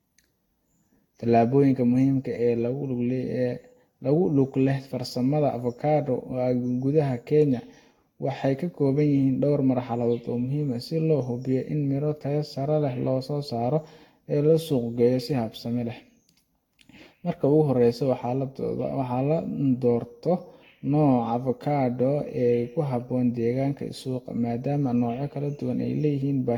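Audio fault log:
throughout, generation loss: the speech sounds swirly, smeared and hollow, with consonant attacks blurred and a watery shimmer in sustained sounds, more damaged than a single pass at its rate would leave, which fits about five passes through a Vorbis-type codec near 64 kbit/s. The likely cause is repeated lossy re-encoding, each pass quantising on a shifted frame grid so errors pile up. A spectrogram shows flickering holes, smeared onsets and nothing above 18.6 kHz.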